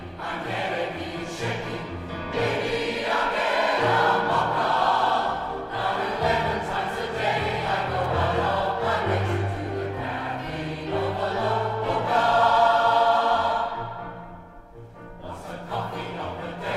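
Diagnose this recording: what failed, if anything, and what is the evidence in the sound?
A single sharp snap lands at 8.04 s, a brief burst of moderate level sitting on top of the sound. This is an electrical switching spike, likely from a nearby switch, motor or static discharge arcing and coupling into the analogue wiring before conversion.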